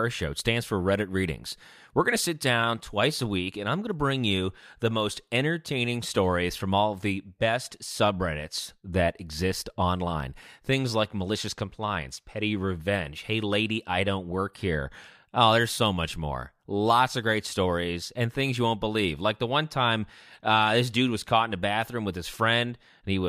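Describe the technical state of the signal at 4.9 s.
At 4.9 s the speech signal is intact, with no technical fault present at that moment.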